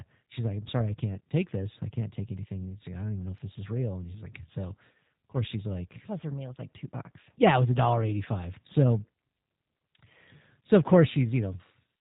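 The whole clip has a slightly rough, synthetic quality with nothing above 4 kHz. That is the G.729 codec, which rebuilds speech from a filter, pitch predictor and sparse pulses, consistent with about 8 kbit/s.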